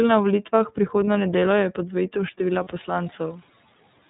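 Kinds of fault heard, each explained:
iLBC codec: The speech was carried by the iLBC narrowband codec at 13.33 kbps in 30 ms frames, each coded on its own without reference to the previous one. Nothing above 4 kHz survives, so the voice sounds dull and boxy, and the coding damage is plainly audible as a rough, slightly synthetic grain across the whole clip. The background noise, which rises by about 18 dB around 2.5 s, comes through coarsely too.
Lost iLBC frames: Two single 30 ms packets went missing, at about 1.05 s and 2.64 s, and each time the decoder filled the hole by repeating the last pitch cycle blended with noise. This shows up as a brief held, faintly buzzy vowel-like smear. Because every iLBC frame stands alone, the speech snaps back to normal right after each gap.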